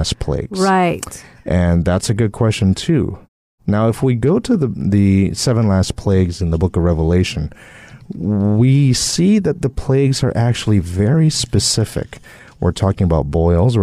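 No technical faults can be heard anywhere in this speech recording. During the pauses the output fades to silence and the background drops away, then returns in time for the next sound without clipping any speech.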